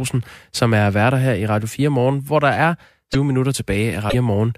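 At 3.12 to 3.15 s and again at 4.09 to 4.14 s the speech jumps ahead and a short glitch follows. That's likely a broken MP3 bit reservoir: frames went missing, and the next ones reached back for borrowed data that wasn't theirs.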